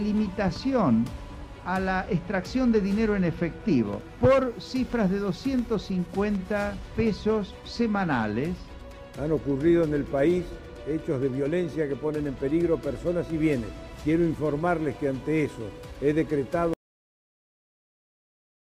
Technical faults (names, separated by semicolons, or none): loud pop; adaptive stream at a lower bitrate; cut-off end